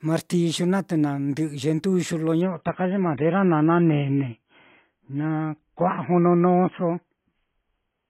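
At 2.41 s the speech abruptly loses its brightness and stays dull and smeared through to the end, with nothing audible above about 3.8 kHz and a swirly, metallic edge on the remaining sound. There's no dropout at the switch. This is an adaptive stream at a lower bitrate: a slowing connection made the player swap to a far leaner AAC version, which fits a drop from around 96 kbit/s to roughly 16 kbit/s.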